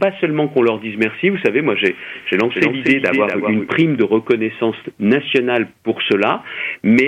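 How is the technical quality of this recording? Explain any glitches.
A single glitch stands out. A doubled audio track runs from 2.16 to 3.68 s: a full-band second copy trails the original by roughly a fifth of a second, around 5 dB quieter, likely from a slower capture path or misaligned edit. It sounds like a dry, flat echo that switches on and off abruptly.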